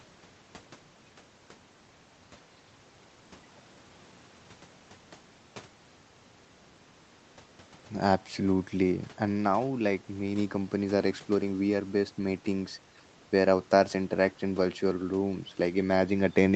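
No technical faults can be heard in this speech; the call microphone processing leaves nothing above 8 kHz, and the room noise sits about 30 dB below the speech.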